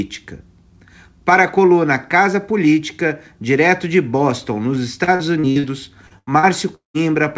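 Choppy stretches break up the speech from 5.04 to 5.66 s and again from 6.07 to 6.97 s: repeated packet loss (robotic sound). Lost packets were patched by stretching the preceding sound, with roughly a third of each span filled in, the longest hole 194 ms. The G.722 call path shows as nothing above 8 kHz.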